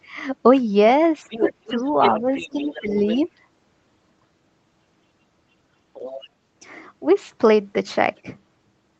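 From 1.3 to 2.81 s, a second voice sits about 10 dB under the speech: the other side's voice leaking through, likely loudspeaker echo the canceller left behind. Weaker scraps return at 3.07–3.27 s and 5.94–6.27 s, roughly 20 dB down, and a faint trace at 8.16–8.20 s. Starting within the first stretch, the main speech dips at 1.40–1.45, 1.65–1.82, 2.20–2.28 and 2.53–3.28 s. This is speech suppressed in double talk, likely the canceller turning both voices down because it could not separate them. The drops range from slight to deep, around 15 dB at worst.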